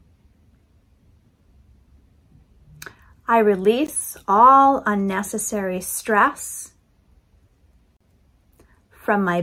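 At 3.87 s a short hole cuts through the sound: a 16 ms block of digital silence, where the sound dropped straight to silence and back with no fade. The output buffer was likely not filled in time.

From 7.97 to 8.01 s a brief hole of about 40 ms opens, its edges smeared, before the sound resumes where it stopped. This is a gap at a join of encoded pieces: separately encoded segments, here about 10 s long, were joined with their encoder start delay and final-frame padding left in.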